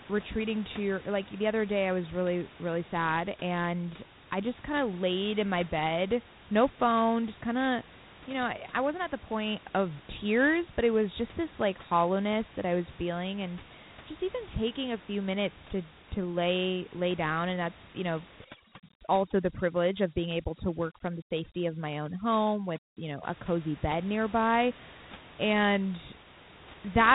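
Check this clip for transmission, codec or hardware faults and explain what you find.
Two faults are audible in this speech clip: one codec fault throughout and one processing fault in a single stretch.

Dialogic VOX ADPCM, throughout: the 4-bit adaptive coder stores only each sample's step from a prediction, so coarse steps leave a gritty hiss trailing the speech. Nothing is heard above 3.8 kHz, which fits an 8,000-sample-per-second, 32 kbps stream.

Overdone noise removal, 18.44 to 23.23 s, after "and that's you know" and before "a cozy bed nearby": an over-aggressive noise reducer shuts off frequency bands near its noise estimate. The room noise, about 21 dB below the speech elsewhere, drops and breaks up into twinkling specks.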